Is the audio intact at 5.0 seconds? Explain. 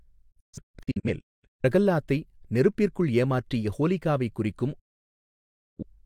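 No. A digital broadcast dropout runs from 4.79 to 5.83 s. The receiver stopped getting decodable frames and muted. The speech fades out in about 8 ms, and roughly a second of audio is gone. Sound returns later in the programme.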